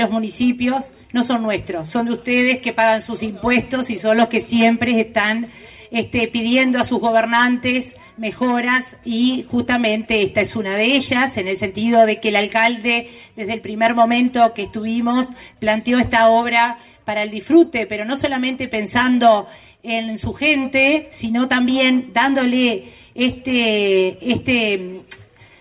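No technical faults are audible.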